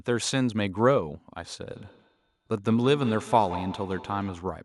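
From 1.74 s to 4.55 s the speech is trailed by a second copy of itself, coming back about every 150 ms and sitting about 14 dB below the direct sound at its loudest. This is feedback echo between two devices: a second device in the same room plays back what the first microphone sent, that microphone hears it again, and its echo canceller ignores sound from a device it isn't driving.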